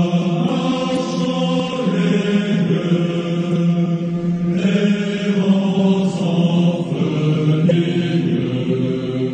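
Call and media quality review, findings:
Damaged data in a compressed stream: corrupted frames, decoder loses sync and hunts for the next header. Brief blips at 0.93, 3.49 and 7.67 s, each about 0.04 s.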